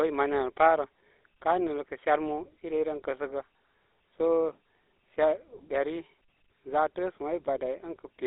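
From start to finish the speech carries the GSM full-rate codec's signature damage. It has a buzzy, gravelly roughness from pulse-driven excitation modelling, consistent with the 13 kbps full-rate coder. The band runs roughly 300 Hz to 3.7 kHz. On a spectrogram, energy stops sharply there, with coarse, smeared harmonics.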